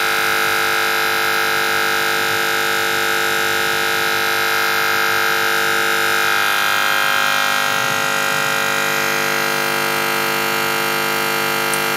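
Nothing technical stands out here: the sound carries on steadily with no faults to point to anywhere along the way.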